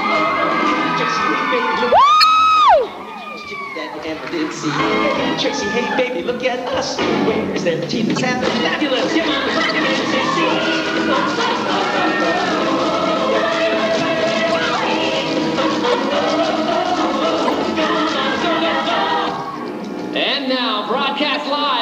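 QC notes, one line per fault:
2.20–2.24, 8.16–8.21, 9.64–9.71, 14.52–14.57, 15.92–15.94, 17.45–17.50, 21.32–21.36 s, corrupt frame decoded: damaged compressed frames decoded anyway throw energy into wrong bands, giving brief chirps and noise bursts, loudest around 2.2 and 17.5 s. These show as short vertical smears on the spectrogram and abrupt waveform spikes.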